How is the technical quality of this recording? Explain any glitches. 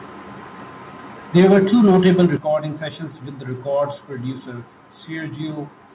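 The recording has two bursts of clipping, each followed by an abrupt drop in level, all within the first two and a half seconds.

Microphone overload, 1.36 to 1.58 s and 1.84 to 2.26 s: the input was likely set too hot, driving peaks about 4 dB past the converter's ceiling. Their tops are sliced flat, giving a harsh, crackly edge, heavier in the first burst.

Microphone volume stepped down, at 1.37 s and 2.37 s: the call software likely cut the device gain in one move after detecting clipping, by about 3 dB and then about 8 dB. Sound and background suddenly get quieter.

The band-limited call path, with nothing above 4 kHz, adds its own narrow, telephone-like character.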